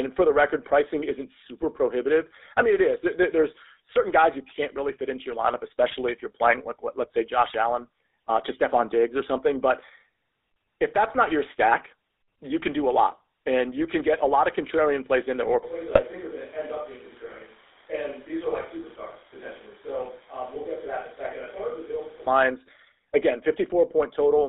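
Speech heard throughout through the GSM full-rate codec, with a buzzy, gravelly roughness that fits the 13 kbps full-rate coder. On a spectrogram, energy stops in a hard ceiling near 3.7 kHz and thins below 300 Hz, and the harmonics look smeared and grainy. GSM bit errors break the speech into brief squawks and pops: at 7.40 s right after "playing like let's say", at 12.6–12.65 s between "not your stack you" and "do a lot and", and at 15.88–16.01 s. Each shows as a short vertical smear of misplaced energy in the spectrogram and a sudden spike or odd bulge in the waveform. From 15.63 to 22.27 s, just after "plays in there or", the sound abruptly turns roomy and hollow, likely from a switch to a distant microphone. The waveform steps down by about 10 dB, the low end thins, and room noise sits only about 20 dB below the speech, visible as a raised noise floor between phrases until the sudden return.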